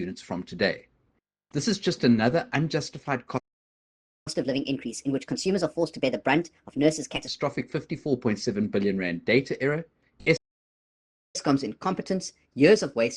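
At 3.38 s a playback stall silences the sound for about 0.88 s, likely because the player ran out of data; the waveform shows a flat gap and the spectrogram a blank column. From 4.28 to 7.28 s comes catch-up at higher speed: the backlog plays at 1.25x, about four semitones sharp, with harmonics shifted upward on the spectrogram. A second stall at 10.36 s lasts about 0.98 s, likely from the same cause. From 11.36 s to the end, catch-up runs at 1.15x, about two semitones high.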